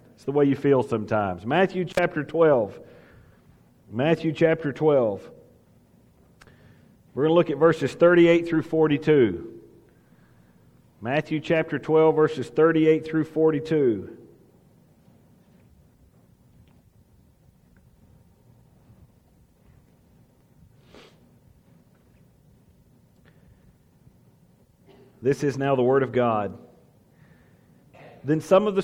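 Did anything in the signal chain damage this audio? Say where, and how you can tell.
Yes, in the analogue wiring: an intermittent contact, where a loose cable or plug briefly lost connection. Between 1.91 and 1.99 s the sound drops out for about 50 ms, with crackle at both edges as the contact breaks and remakes, leaving only faint hiss during the gap.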